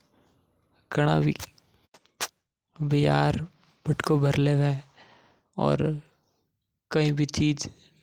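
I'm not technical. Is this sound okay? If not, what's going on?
Yes, this recording is technically sound, with nothing in the signal that needs fixing.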